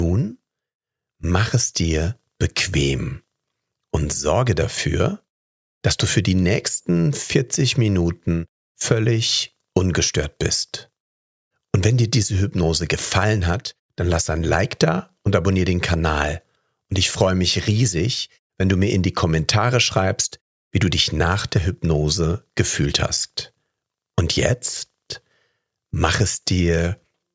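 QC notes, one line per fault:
Nothing stood out on listening.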